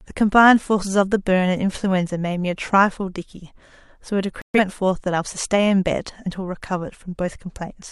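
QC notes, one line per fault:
4.42–4.59 s, digital broadcast dropout. The speech cuts to silence for about 0.18 s, then resumes later in the programme. The receiver lost valid frames and muted until good ones arrived. The missing 128 ms of audio fits roughly three failed frames.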